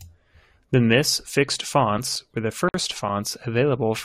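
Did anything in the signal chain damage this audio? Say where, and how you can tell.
Yes. Playback from a scratched CD: ten regular ticks, each a few milliseconds, from 1.63 to 3.27 s. They recur with each disc turn, where error correction failed.

There is also a gap at a join of encoded pieces, a 53 ms gap at 2.69 s. Encoder delay and padding were left in when the separately encoded pieces were joined.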